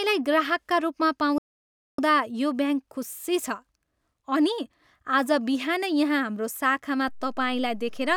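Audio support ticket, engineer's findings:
Playback stall, 1.38 to 1.99 s: speech cuts to silence for about 600 ms mid-flow, then resumes. Likely cause is the output buffer running dry or the playback thread being blocked, leaving the device with nothing to render until the player recovered.

DC step at 7.08 s: low thump as the waveform's zero line jumps to a new offset, held through to the end of the clip. Speech continues unchanged over it. Points to converter recalibration or an input with a DC offset being switched in.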